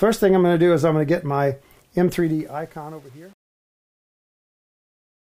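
From 2.11 s the fade-out picks up truncation distortion on a fade, with no dither and steps that fit roughly 8-bit resolution. From 2.43 s to the end it turns gritty.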